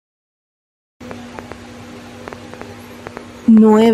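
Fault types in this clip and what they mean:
Train of clicks: likely interference or a faulty connection injecting pulses, heard as irregular popping about 4.2 times a second from 1.11 s onward.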